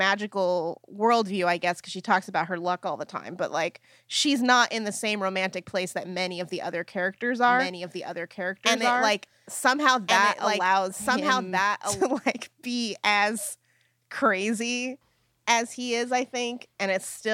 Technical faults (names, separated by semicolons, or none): doubled audio track